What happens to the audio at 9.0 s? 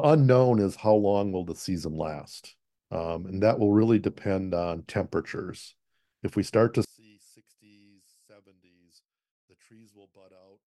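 At 9.0 s the speech sits inside a drop of about 34 dB running from 6.85 s, just after "we start to", to the end, likely one channel inverted and cancelling in the mono sum.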